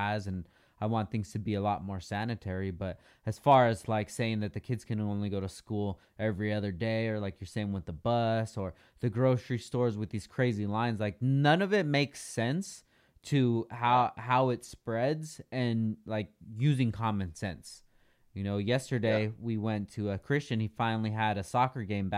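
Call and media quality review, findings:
Nothing to flag on this speech recording; no audible problems turned up anywhere in it.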